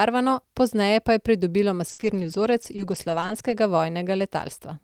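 From 1.87 to 3.52 s the speech breaks up with repeated packet loss, giving a robotic sound. Audio data went missing six times across this stretch. Each hole was patched by stretching out the sound just before it. About 150 ms was filled this way, and about 140 ms was lost outright. The longest gap is 60 ms. Roughly 0.7 s of the speech had to be rebuilt around these holes. It sounds choppy, with pieces dropped.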